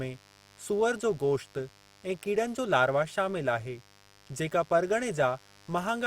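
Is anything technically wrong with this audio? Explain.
Yes. A mains buzz runs under the speech for the whole clip. Somewhere in the chain, a dimmer, a rectifier or a missing shield is letting in sharp switching spikes that repeat twice in every 50 Hz cycle. Because the spikes are so abrupt, they carry harmonics of 50 Hz reaching into the kilohertz range. What you hear is a constant, raspy buzz sitting about 30 dB below the speech and present from start to finish.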